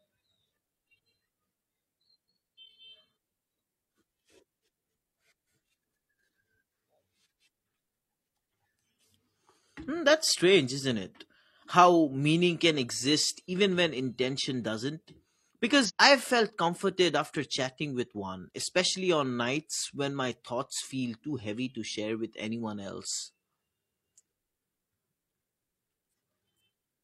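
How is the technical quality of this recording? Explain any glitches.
The speech recording has one glitch. From 15.85 to 15.91 s, just before "I've felt comforted after", there is damaged data in the compressed stream. A short run of corrupted bytes makes the decoder misread those frames and lose sync until it finds the next valid frame header. The result is a brief 60 ms glitch.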